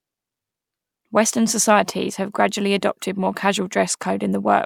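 No technical fault can be heard in this speech recording, and the signal stays intact and continuous for its whole duration.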